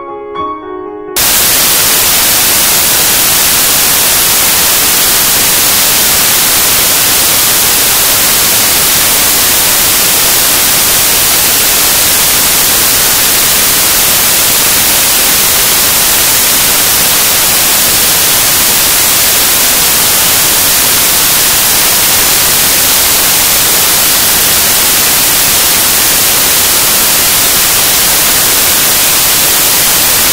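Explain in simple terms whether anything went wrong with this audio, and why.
From about 1.17 s right to the end, the music is buried under loud hiss. That's samples built from the wrong bytes: the player stitches each sample's bytes together incorrectly, so the jittery low-order detail gets treated as the main signal, which comes out as loud, harsh noise.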